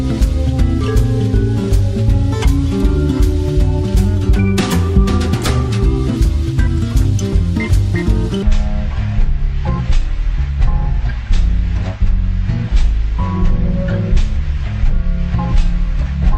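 From 8.43 s to the end at 16.37 s, a section at the wrong speed takes over. Playback runs at 0.531 times the original rate, close to half speed. Pitch and tempo fall together at that instant. Everything drops by roughly ten semitones and drags noticeably. The likely cause is the section being read against the wrong clock, so its samples come out too slowly. Nothing returns to normal speed before the audio ends.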